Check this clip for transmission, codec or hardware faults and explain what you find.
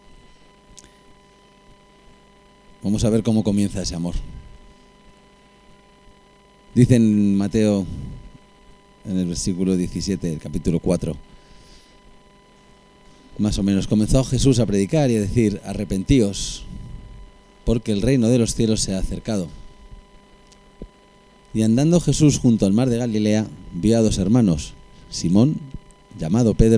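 Checking this clip turns up no faults to explain.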